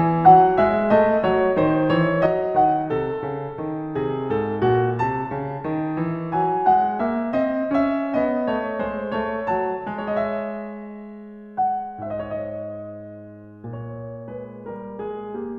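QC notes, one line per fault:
2.26 s to end: one channel drops out. At 2.26 s the music abruptly falls about 6 dB and stays down for the rest of the clip. The likely cause is one side of the stereo pair going dead. The parts both channels shared now come from a single channel in the mono sum, so they lose half their level.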